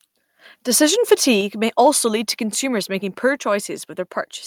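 At 1.41 s the microphone volume was likely stepped down by the call software, so speech and background drop abruptly by about 4 dB.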